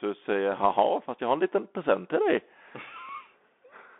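A short speech clip carried over a Bluetooth CVSD headset codec for its whole length. The sound is confined to roughly 250 Hz to 3.5 kHz, which fits a 64 kbps one-bit delta stream. Each bit only nudges the waveform up or down, with an adaptive step. Fast, loud high content outruns that step and distorts. Sibilants turn scratchy, and a granular hiss sits under the speech. The codec damage is plainly audible. At 3.09 s there is a brief underrun with held sample. The output buffer ran dry for about 2 ms, and the converter froze on its last value, so the waveform goes flat. About 2 ms of live audio was lost in that gap. When playback resumes, it jumps to a new point in the waveform.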